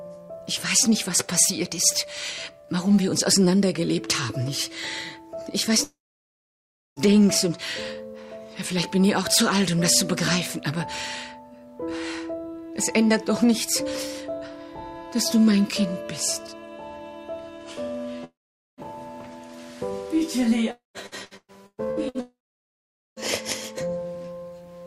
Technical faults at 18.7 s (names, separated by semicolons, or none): long network dropout